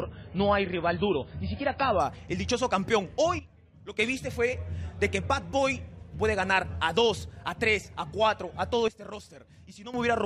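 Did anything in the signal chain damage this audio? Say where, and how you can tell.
Yes. At the network and playback stage, the adaptive stream started at a low bitrate, likely to start playback quickly before the connection had been measured. From 0 to 2.0 s nothing reaches above 5 kHz, and codec artefacts are heavier. That fits an MP3 stream near 19 kbit/s. At 2.0 s the quality steps up abruptly with no gap, to a level consistent with about 128 kbit/s, as the player switches to the better rendition.

There is also a sudden gain jump twice, most likely from a digital gain setting or bit shift applied with no ramp, somewhere between the driver and playback. From 3.39 to 3.99 s, and again from 8.88 to 9.94 s, the level drops by about 12 dB in a single sample and then returns just as abruptly. The background noise falls and rises with the sound, which shows the whole signal was scaled rather than the source getting quieter.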